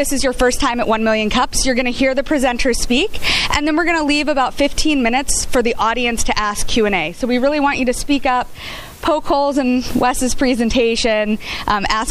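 Nothing is technically wrong with this audio clip.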